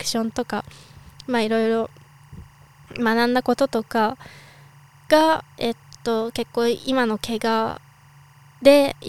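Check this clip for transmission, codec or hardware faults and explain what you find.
One hardware fault runs through the whole clip: timecode bleed. Linear timecode at 23.976 frames per second is leaking from a neighbouring track or cable into the speech path, so a square wave flipping between tones near 1 and 2 kHz sits roughly 35 dB below the speech, heard as a steady chirping warble.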